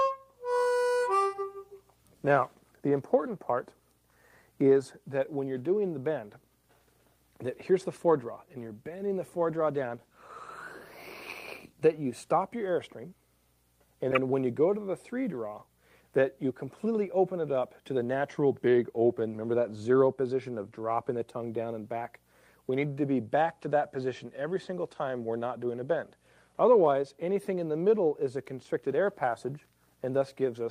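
From 9.51 to 11.87 s there's a call bitrate drop. The connection's bandwidth estimate sagged, so the encoder got squeezed onto a much smaller bit budget and started coding everything more coarsely. You hear the audio go rough and a bit watery for about 2.3 s, which fits the rate falling from around 32 kbps to around 17 kbps, before the detail comes back as the bitrate recovers.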